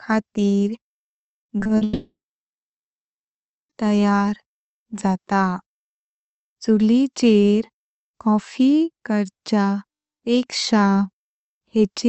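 From 1.41 to 1.83 s, repeated packet loss (robotic sound) chops the speech with six short concealed gaps, the longest 40 ms, giving a choppy stutter rather than one clean break. From 1.83 to 3.71 s comes what is likely a long network dropout: the last sound smears briefly, then about 1.6 s of silence follows before speech resumes with that stretch missing.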